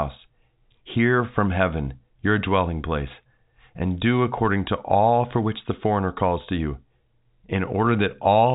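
Telephone-coded speech, with no faults to report.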